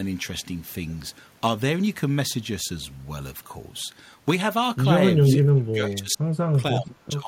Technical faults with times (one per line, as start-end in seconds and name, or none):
0.00-7.27 sample clock jitter
5.29-5.38 echo leak
5.40-7.27 speech suppressed in double talk